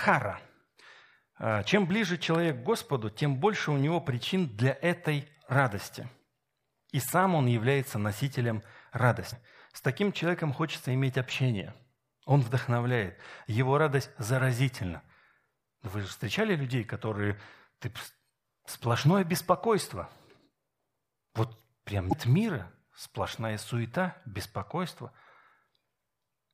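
At 9.29 to 9.33 s and again at 22.09 to 22.13 s, damaged data in a compressed stream produces a short burst of garbled sound. Corrupted bytes leave the decoder unable to read the frames there, so it loses sync and resumes at the next valid header.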